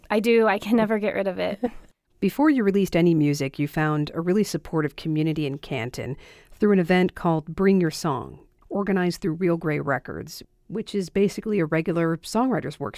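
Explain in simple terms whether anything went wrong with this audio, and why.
Nothing went wrong here: the speech comes through as one steady, unbroken signal, with no technical fault to be heard anywhere in the recording.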